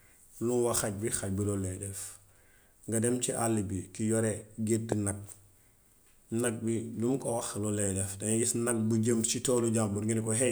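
A loud pop hits from 4.92 to 4.94 s, peaking well above the speech. A second, milder pop follows at 9.58 to 9.60 s, just after "bu jëm ci". Each is a single sharp click. The likely cause is a brief voltage spike. Speech continues underneath.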